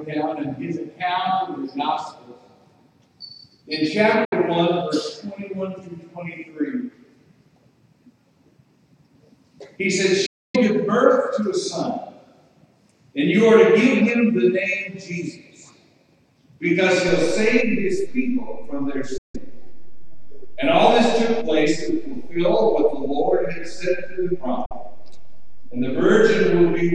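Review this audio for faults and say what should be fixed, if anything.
Bluetooth dropout: audio packets likely missed their delivery deadline over the wireless link and were discarded. The output falls silent at 4.25 s (about 70 ms), 10.26 s (about 280 ms), 19.18 s (about 160 ms) and 24.66 s (about 46 ms). Each time, the sound resumes further along, as if it had kept playing through the gap. To prevent this, keep the headphones close to the source, reduce 2.4 GHz interference, or use a wired connection when recording or monitoring.

DC step: the zero line of the waveform jumps at 17.09 s and the offset holds until the end. This produces a single low thump, while the sound itself carries on unchanged. To prevent this, put a DC-blocking high-pass filter in the chain, and avoid switching inputs or recalibrating converters mid-take.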